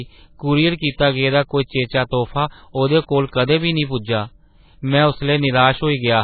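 MP3 compression runs throughout the speech, from start to finish. The treble stops abruptly at about 4.5 kHz, so s sounds lose their hiss and the speech sounds muffled and boxy. The heavy damage is likely from an encoder starved of bits, consistent with a very low bitrate around 16 kbps. It discarded the weak frequency lines, which now flicker in and out between frames, producing a watery, swirling texture and blurred consonant onsets.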